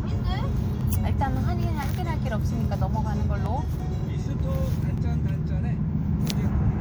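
Everyday sound with five sharp single clicks at 0.81, 1.83, 2.64, 3.46 and 4.98 s. Each shows as a thin vertical line across the spectrum. The likely cause is dropped samples. Under a millisecond goes missing each time, so the waveform jumps abruptly.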